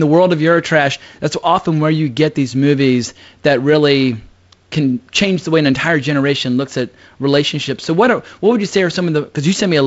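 No technical fault can be heard in this speech. It has been carried by G.722 wideband telephone coding, with nothing above 7.7 kHz and only a light coding noise that fits the 48 kbit/s mode.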